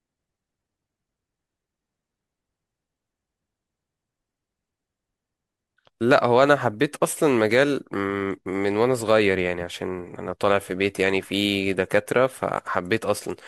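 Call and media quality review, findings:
At 8.46 s, speech jumps ahead with no silent gap; likely dropped buffer (overrun), about 20 ms overwritten before capture read it.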